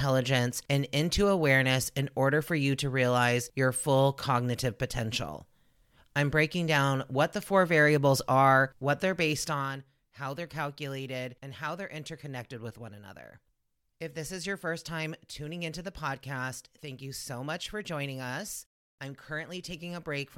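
From 9.46 to 9.82 s, after "variables are what they're", a zipping tick rides the speech as the level falls roughly 10 dB. This is zipper noise, from unsmoothed gain steps at around 50 per second.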